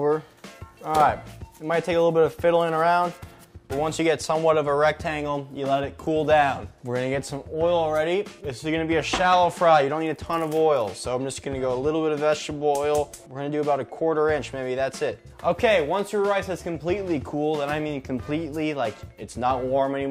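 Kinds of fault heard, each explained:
No audible faults detected.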